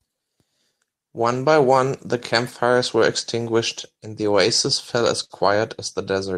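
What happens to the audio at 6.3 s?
At 6.3 s the audio is still affected by clock drift between sender and receiver, which runs through the whole speech clip. The sender's clock runs slower than the receiver's, by roughly 4 percent. The jitter buffer keeps draining, so the receiver repeats short pieces to fill the gap and can briefly run empty. This is heard as small timing hiccups, stutters or tiny gaps in the flow, recurring at uneven intervals.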